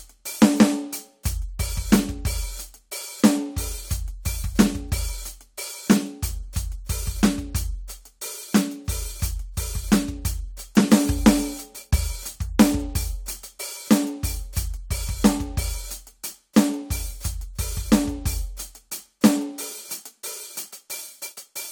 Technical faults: none

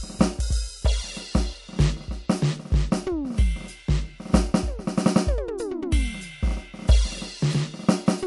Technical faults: low-bitrate audio saved at a high bitrate

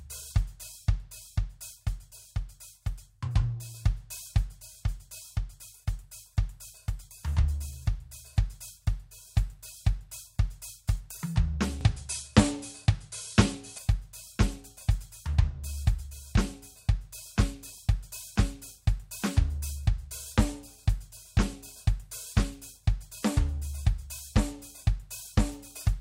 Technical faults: input switched to a poorer device

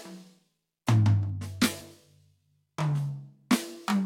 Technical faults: channel delay (comb filtering); overlap between stream segments

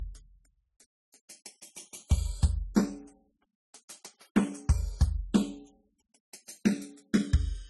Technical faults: channels drifting apart; transcoding between lossy codecs

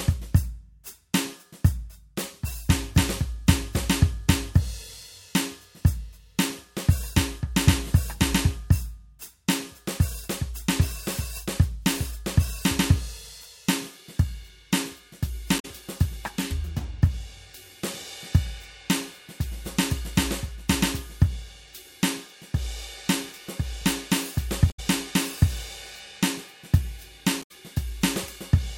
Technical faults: damaged data in a compressed stream

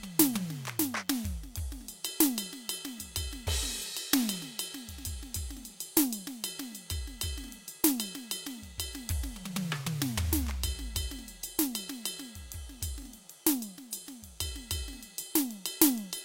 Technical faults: DECT cordless phone buzz

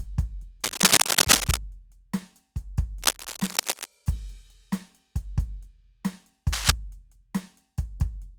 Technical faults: cable scratch noise

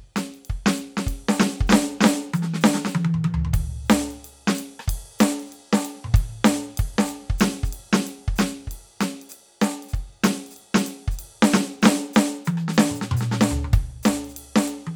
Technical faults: none

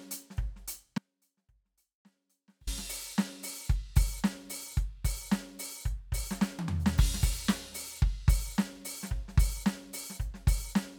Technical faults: audio dropout to a faint residue

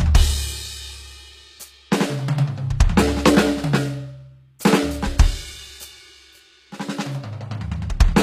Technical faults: HE-AAC compression

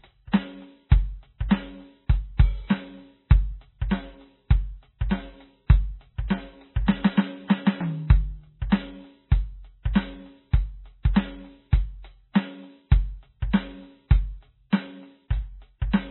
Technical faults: MP3 compression

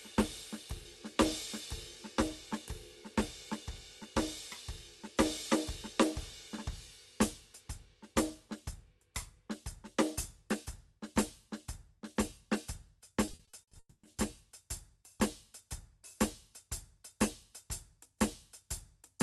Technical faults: repeated packet loss (robotic sound); long network dropout

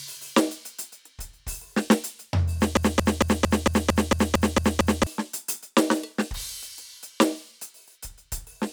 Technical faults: broken-record loop

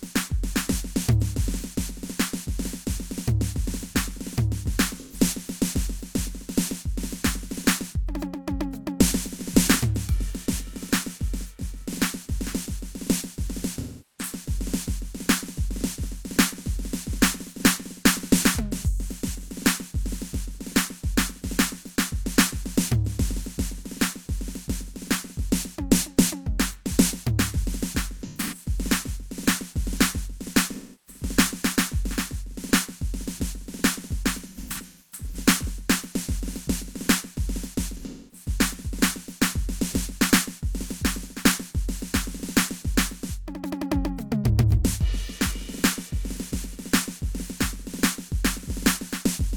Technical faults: AAC frame loss with concealment

